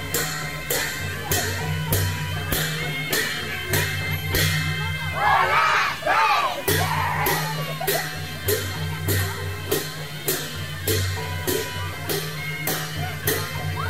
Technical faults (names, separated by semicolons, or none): low bit depth without dither; DAB burbling